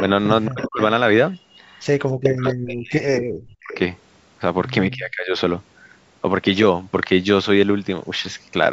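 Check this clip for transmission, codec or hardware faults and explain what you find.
Three faults are present: sample clock jitter throughout the clip, echo leak in three short bursts, and speech suppressed in double talk in three stretches.

Sample clock jitter runs through the whole clip. The converter's clock wanders by well under a microsecond, so each sample is taken at a slightly wrong instant. The resulting error scales with how steeply the waveform is changing, and here sits roughly 50 dB below the speech. It is heard as a faint hiss or grit that rides on louder, brighter passages and disappears in the pauses.

Echo leak appears at 0.46–0.84 s, 2.46–2.53 s and 3.61–3.79 s. A delayed copy of the speech arrives 292 ms behind the original, at about 10 dB below it in the first two bursts and about 15 dB below in the third. This is likely a far-end loudspeaker being picked up by a microphone whose echo canceller let some of it through. 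It sounds like a delayed repeat of the voice.

Speech suppressed in double talk occurs at 0.48–0.8 s, 2.15–3.73 s and 4.93–5.38 s. The drops reach about 30 dB in the first and last stretches and about 40 dB in the middle one. The likely cause is an echo canceller that could not separate the near talker from the returning echo while both were active, so it attenuated everything. The speech dips sharply or breaks into fragments. The first two stretches overlap the echo bursts, where echo and suppression are heard together.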